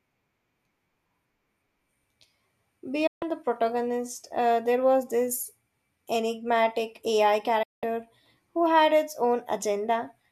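At 3.07 to 3.23 s the speech mutes abruptly and returns just before "the protagonist uh there". At 7.63 to 7.83 s it drops out again, for about a fifth of a second. Both are digital broadcast dropouts: the receiver stopped getting valid frames and muted, fading out over about 8 ms. The 144 ms and 192 ms gaps would fit six and eight lost 24 ms frames. Unlike analogue fading or packet-loss concealment, the gaps are clean silence with no hiss, warble or smeared fill.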